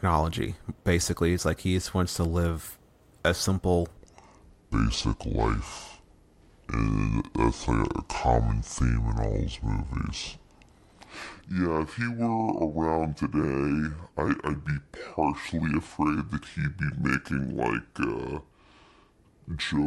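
A likely clock or sample-rate mismatch leaves a section at the wrong speed in this speech recording: from 3.97 s to the end, playback runs at 0.65 times the original rate, so the voice drops about seven semitones and sounds deep, slow and dragged.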